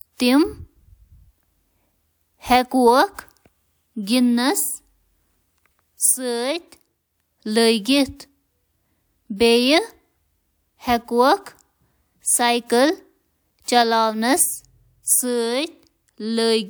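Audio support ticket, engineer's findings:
Nothing stood out on listening to the speech in this recording.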